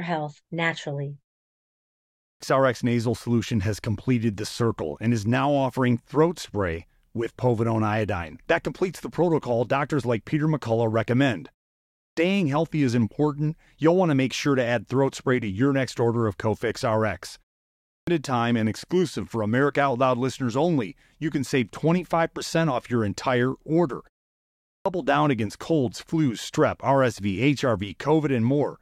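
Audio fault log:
2.07, 11.84, 17.72 and 24.53 s, clipped start after a pause: speech resumes abruptly out of silence with its opening sounds missing, roughly a third of a second lost each time, before "healthy is important you'll", "time and exclusive for" and "down against colds flus". The output device drops into a sleep state during pauses of 0.37 to 0.91 s and needs time to wake and lock again, so the first part of each phrase never reaches the output.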